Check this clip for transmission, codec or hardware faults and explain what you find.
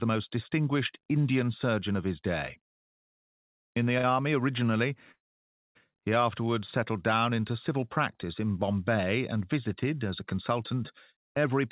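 Three transmission faults are audible, all from the timing side of the call path. The band stops at 4 kHz, which fits a G.711 mu-law call codec.

From 3.98 to 4.06 s there is a short stall from a late packet. A packet was not there in time, so the jitter buffer ran dry. The receiver stretched the last sound for 55 ms until the packet came. Playback then resumed from the same point. Nothing is lost. The sound is simply held too long, with a brief buzz or dip.

From 5.12 to 5.77 s the audio stops. A call audio freeze is the likely cause. Delayed packets left the jitter buffer empty for 636 ms. The receiver extended the last sound briefly, then it faded out. About 570 ms of that stretch is silence. When the packets arrived, playback picked up where it had stopped. So a gap was inserted, and nothing is missing.

From 11.12 to 11.63 s there is a jitter buffer speed-up. The buffer was holding more audio than its target. 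To cut that delay, the receiver removed short pieces of one or a few pitch periods each, many times in a row. In total about 50 ms was taken out. The audio runs at 108% speed with its pitch unchanged. It sounds hurried.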